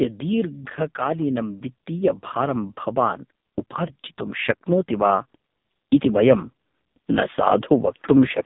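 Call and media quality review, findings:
AMR narrowband mobile codec, whole clip: speech squeezed through AMR-NB at a very low bit rate, which fits one of its lowest modes at around 5 kbps. The band runs roughly 150 Hz to 3.7 kHz, with nothing above 3.8 kHz. Heavy codec damage: the vocal-tract model, fed by very few excitation pulses, renders the voice buzzy and synthetic, and sibilants lose their top end.

Automatic gain rising, 0.95 to 3.27 s: the AGC judged the input too quiet and ramped its gain up about 8 dB over more than two seconds. Voice and background swell together as a slow level climb, not a step.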